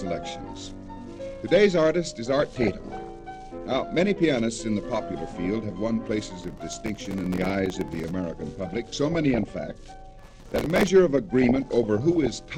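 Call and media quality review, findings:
DAB burbling, 2.39 to 3.10 s: bubbling, squelchy chirps over the sound, bands jumping in level frame by frame. Weak DAB reception; bit errors slipping past error correction into MP2 data, corrupting samples and scale factors. Around one percent error rate implied. Recurs 8.59 to 9.51 s and 11.41 to 12.36 s, same burbling, errors nearer half a percent, several dozen frames hit each time.

Processor overload crackle, 6.42 to 8.11 s: dense gritty crackle, tearing texture riding on the sound, ends abruptly. Processor missing deadlines on very short buffers, a few milliseconds each, dozens missed across the stretch; each miss replays stale audio with hard edges. Same signature again 10.19 to 10.88 s, load spike clearing afterwards.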